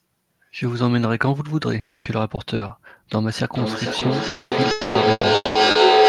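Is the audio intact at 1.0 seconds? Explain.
Yes, the speech at 1.0 seconds is intact, with no dropout, click, distortion or other fault audible at that point.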